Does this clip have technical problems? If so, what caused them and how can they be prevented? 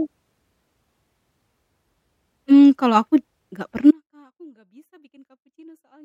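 Yes. At 3.91 s the speech cuts out abruptly and stays gone to the end of the clip, leaving only a faint leak of sound roughly 35 dB below its normal level. This is an audio dropout to a faint residue, not a pause or a fade. The likely cause is a break in the signal path upstream, such as a loose connector or a failing wireless link, while the stages after it stayed live. Secure cables and monitor the link during recording to prevent it.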